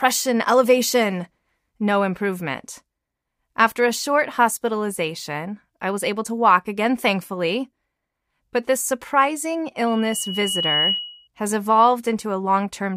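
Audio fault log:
9.87–11.28 s, loudspeaker feedback squeal: the microphone is hearing the loudspeaker it drives, and near 2.9 kHz the gain around that loop climbs above one, so each pass through the system reinforces that frequency further. The result is a single piercing tone that swells over roughly a second until it sits at about the same level as the rest of the sound, then holds as a steady squeal before stopping at 11.28 s.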